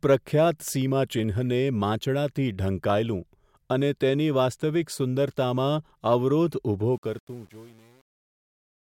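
From 6.93 s to the end, the fade-out passes through a gain stage that keeps too few bits and adds no dither, consistent with an 8-bit path. This is truncation distortion on a fade. From 7.13 s the speech collapses into coarse square steps, sounding gritty.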